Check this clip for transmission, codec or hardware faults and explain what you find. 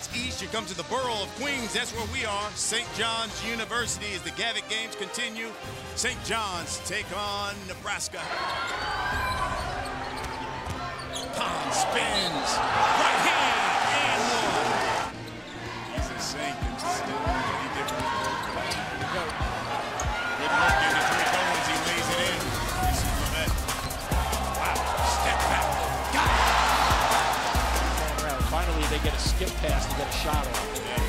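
No transmission, codec or hardware fault can be heard anywhere in the clip, and the signal stays continuous and intact throughout.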